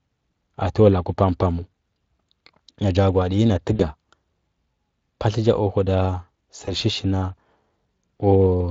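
Speech, carried over Speex, whose light hoarseness suggests a mid-rate setting near 24 kbps, is marked by VoIP packet loss concealed by the speech codec at 3.75–3.82 s, just after "gwa di nyi na", and at 6.65–6.72 s. About 40 ms and then 20 ms of audio go missing, and the decoder extrapolates from the last pitch and filter with fading gain, and the voice stays weak briefly afterwards. Unlike a plain dropout, there is no silent gap or click.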